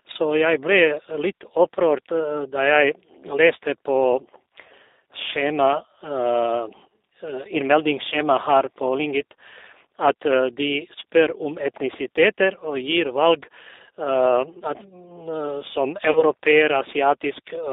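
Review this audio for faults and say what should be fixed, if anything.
The call path ran through the G.729 codec, which sounds like an 8 kbit/s G.729A link, squeezing the speech into a band of about 300 Hz to 3.7 kHz and rebuilding it from a filter, a pitch predictor and a few pulses per frame. Across the whole recording the result is plainly audible: dull, narrow speech with a rough, slightly synthetic edge. Preventing this means carrying the call on a wideband or higher-rate codec such as G.722 or Opus.

The network dropped packets, and the decoder covered the gaps with VoIP packet loss concealment, extrapolating from its last pitch and filter state. At 8.10 to 8.16 s the loss fits about two 10 ms frames (20 ms), and at 16.11 to 16.23 s about four frames (40 ms). Each gap comes out as a brief smeared stretch that sags in level, and the speech stays weak or distorted just afterwards. 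Preventing this means giving the voice traffic priority on the network, with a jitter buffer or forward error correction to absorb losses.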